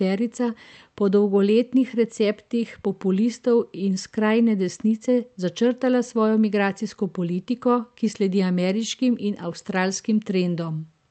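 Speech, with no technical faults to be heard.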